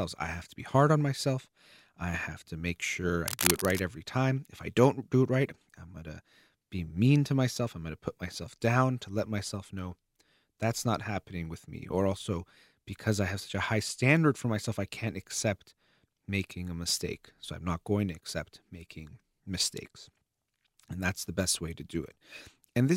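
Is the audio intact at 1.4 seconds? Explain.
Yes, the audio at 1.4 seconds is intact, with no fault to be heard at that moment.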